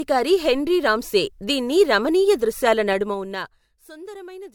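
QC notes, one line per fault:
throughout, generation loss: The audio has passed through lossy coding repeatedly, likely about three MP3 encodes in a row, which fits a bitrate near 100 kbit/s each time. Every pass requantises on a shifted frame grid, so coding noise and spectral holes pile up rather than staying at one pass's level. The speech sounds swirly, smeared and hollow beyond what that bitrate alone would give, and consonant attacks lose their edge.
2.88 to 3.9 s, zipper noise: Just after "రామ్సే దీన్ని రమణీయ దృశ్యాల", the level is pulled down by about 20 dB in unsmoothed 2 dB steps, about ten steps per second. Each abrupt gain jump puts a small discontinuity into the waveform. Together they form a ticking, zipping texture that rides over the speech for about a second while it fades, instead of a clean ramp like a fader move.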